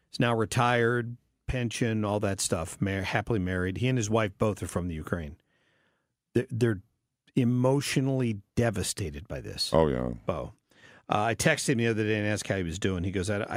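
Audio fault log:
No faults detected in the speech at any point in the recording.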